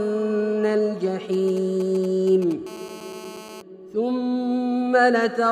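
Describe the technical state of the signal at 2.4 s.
At 2.4 s there are GSM signalling bursts (1.33–2.53 s): a nearby phone's rectified radio bursts make galloping 217 Hz ticks and buzzes roughly 20 dB down, intermittent unlike steady mains hum.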